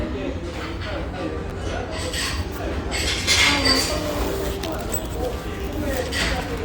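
At 1.50 s and again at 2.30 s there are chunks out of order: a block of about 5.33 ms plays one block late, after the block that should follow it. Nothing drops out, but each swap creates three hard joins, heard as a brief jumbled moment.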